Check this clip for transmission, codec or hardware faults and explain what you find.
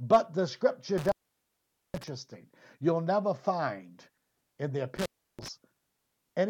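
An intermittent contact in the hardware chain breaks the speech twice. After "the scripture", from 0.98 to 2.08 s, a loose plug or cable conductor opens for about 0.83 s. After "never find in the", from 4.96 to 5.48 s, it opens again for about 0.33 s. Each time the signal path is physically broken, so the speech drops out, leaving only faint hiss. The contact scrapes as it separates and reseats, putting a crackle at both edges of each gap.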